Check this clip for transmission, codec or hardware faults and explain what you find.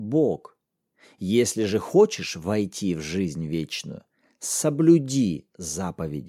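Nothing in the recording stood out on listening as a transmission, codec or hardware problem.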